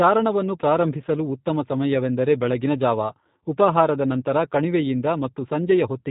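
From start to finish the speech is dull and boxy, with no air or sibilant sparkle above 4 kHz, and its texture is plainly rough and slightly synthetic. That is G.729 codec damage, here the G.729A variant, which fits an 8 kbit/s stream. The codec discards the waveform and rebuilds each 10 ms frame from a vocal tract filter, a pitch predictor and a few sparse pulses, so fine detail is replaced by that buzzy approximation.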